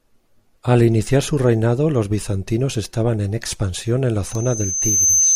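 At 4.24 s a loudspeaker feedback squeal kicks in and runs to the end: the mic is catching its own speaker, and the loop's gain tops one at 6.2 kHz. That thin tone swells over most of a second until it sits about 5 dB above the speech.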